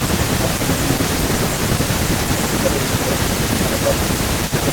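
Echo leak runs from the start of the clip to the end. A delayed copy of the speech trails the talker by about 0.43 s, sitting roughly 10 dB below the direct voice, so a quieter second copy of the voice follows behind it. The likely cause is a far-end loudspeaker whose sound reached its microphone and slipped past an echo canceller that failed to subtract it, so it was sent back down the line.

Speech suppressed in double talk appears from 0.41 to 1.8 s and again from 2.35 s to the end, with about a second of the first stretch audibly affected. During these spans the voice dips by as much as around 10 dB. This likely happened because both sides were talking at once and the echo canceller, unable to tell the local talker from the returning echo, turned the whole signal down.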